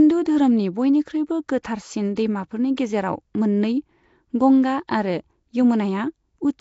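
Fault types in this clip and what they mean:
Nellymoser compression: Rough, hissy, underwater smearing runs throughout and nothing is heard above 7.7 kHz. This fits Flash's Nellymoser Asao codec at 32 kbps, likely the cause.
pre-echo: A brief hiss leads sharp attacks at 1.63, 2.16 and 2.76 s. Coding noise spread across each block arrives about 15 ms early.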